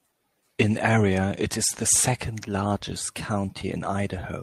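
Speech here, and the sender's clock is running ahead of the receiver's by roughly 5 percent, a classic case of clock drift between sender and receiver. Samples arrive faster than they're played, so the jitter buffer keeps creeping fuller for the whole clip and has to be trimmed back. You hear that trimming as repeated timing corrections from 0.12 to 3.99 s, with the receiver cutting out small slices at uneven intervals. The result plays at about 105 percent speed, with faint hiccups and a slightly rushed, unsteady tempo.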